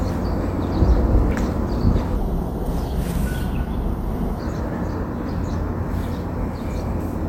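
At 1.31 s there is a bit error spike: a single sample jumps by a power of two and snaps straight back, as if one bit was flipped in storage or transfer. It sounds like one hard tick. On the waveform it is a lone vertical needle, and on the spectrogram it is a thin full-height line.

From 2.16 s to 4.40 s the audio plays at 0.747 times its proper speed, so that section is slowed and sits about five semitones lower before returning abruptly to normal. This section at the wrong speed likely comes from a playback or editing clock mismatch. On the spectrogram, the harmonics shift downward and the events stretch out in time.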